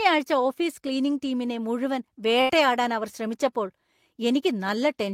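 Speech, with a burst of packet loss from 2.41 to 2.51 s, right after "ഓഫീസ് ക്ലീനിംഗ് ടീമിനെ മുഴുവൻ". The receiver stretches the last sound for about 77 ms, fading it out, then jumps ahead, so roughly 80 ms of speech is simply gone.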